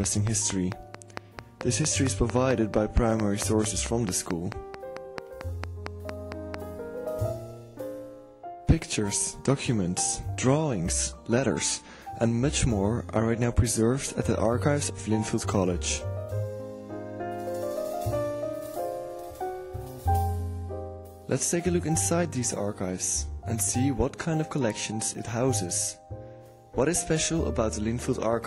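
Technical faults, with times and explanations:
0.04–6.55 s, train of clicks: likely interference from nearby equipment or a faulty connection injects a near-identical pulse at a steady 4.5 per second, around thirty in all. The sharp pops peak well above the sound and tick through the opening seconds.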